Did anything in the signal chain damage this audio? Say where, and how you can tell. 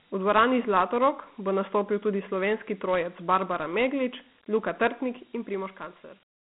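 Yes. The codec stage did the main damage. Across the whole clip this speech sits in a telephone band of about 150 Hz to 3.4 kHz, and nothing reaches above 3.8 kHz. A gritty hiss trails the speech and the coding damage is plainly audible. That is Dialogic VOX ADPCM. Each sample is squeezed into a 4-bit difference from a predicted value. The rate points to 32 kbps, which fits 4 bits at 8,000 samples a second.

The second fault is zipper noise from the level-control stage, from 5.04 to 6.32 s. The sound is turned down by roughly 10 dB. It moves in 1 dB jumps at about ten steps a second, not in a continuous ramp. Each jump is an unsmoothed gain change, so it leaves a small click. Those clicks add up to a ticking, zipping texture that rides on the speech until the fade stops.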